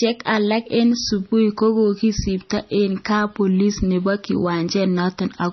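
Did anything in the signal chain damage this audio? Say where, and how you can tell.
Yes, at the codec stage: this is low-bitrate audio saved at a high bitrate, present for the whole clip. The speech has nothing above 5.9 kHz, so it sounds dull, with the artefacts of a heavily compressed MP3. That fits a 24 kbit/s MP3 likely re-encoded at around 192 kbit/s; the second pass cannot restore what the first discarded. On a spectrogram, energy stops at a flat ceiling near 5.9 kHz from start to finish.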